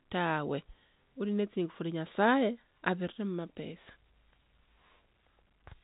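Nothing is technically wrong with this speech clip; it sounds like an ordinary telephone-line recording with nothing above about 3.8 kHz, consistent with G.711 A-law coding, and any coding noise stays faint.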